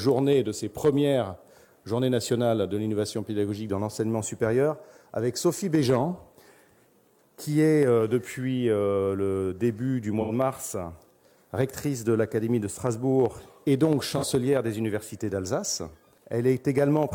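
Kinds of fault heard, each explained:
AAC frame loss with concealment: bits of the stream went missing and the decoder papered over them from the last good spectrum, so you hear short smeared, noisy patches rather than gaps, at 10.21 s for 85 ms (fits two frames) and 14.17 s for 43 ms (one frame).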